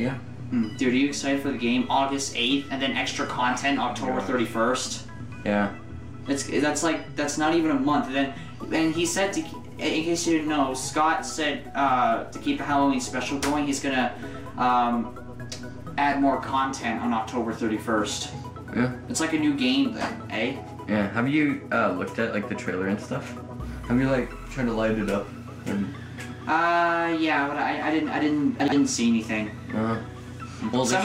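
Chunks out of order occur from 28.6 to 28.72 s. One 40 ms block of audio reached the output two blocks late, so it plays after the two 40 ms blocks that should have followed it. No audio is missing, but the 120 ms stretch is reshuffled, with three hard joins where unrelated waveform edges meet. The result is a brief scrambled stutter in the sound.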